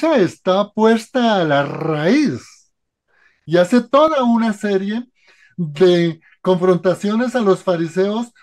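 Channel delay (comb filtering) sets in at 4.08 s and runs to 8.36 s. One channel arrives roughly 5 ms behind the other, and when the pair is folded to mono the shared content cancels at a regular series of frequencies, the lowest near 100 Hz with further notches spaced evenly above it. From that point the sound turns hollow and phasey, its tone thinned by fixed gaps across the spectrum.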